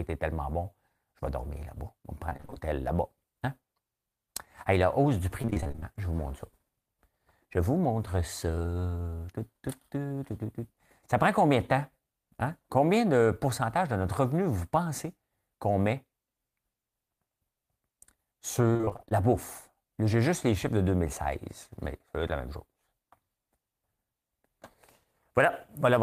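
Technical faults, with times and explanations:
2.29–2.58 s, repeated packet loss (robotic sound): seven short gaps, the longest 29 ms, were each patched by extending the preceding sound, leaving about half this stretch concealed and choppy.
5.42–5.84 s, just after "la hausse du", repeated packet loss (robotic sound): eleven dropouts, none over 25 ms, filled by repeating earlier audio, so the speech turns choppy and broken.
18.73–19.13 s, repeated packet loss (robotic sound): ten lost pieces up to 27 ms, each bridged by continuing the last sound, making half the span choppy and stuttering.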